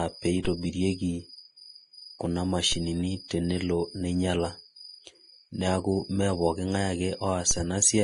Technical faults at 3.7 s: Vorbis compression

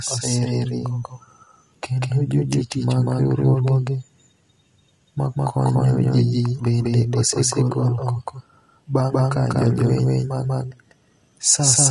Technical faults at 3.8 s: doubled audio track; low-delay AAC compression

